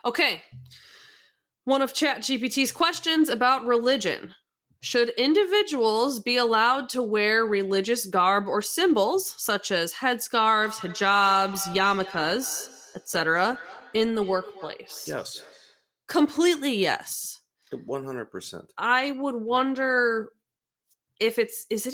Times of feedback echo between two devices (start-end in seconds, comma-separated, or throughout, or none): 10.60-15.89